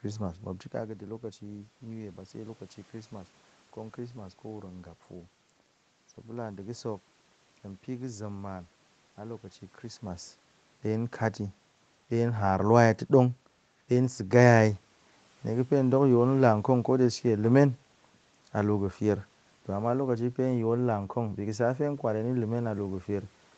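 Nothing here counts as a technical fault: the speech comes through a call path with nothing above 8 kHz and some room noise in the background, and the level shifts near 0.5 s and 10 s are just the talker moving relative to the microphone.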